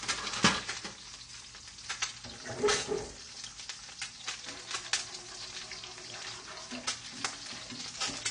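From start to finish the top end just stops at about 9.6 kHz, and the sound comes across dull and smeared with a fizzy, warbling edge. That's classic AAC compression, likely AAC-LC starved of bits, which fits something near 32 kbps.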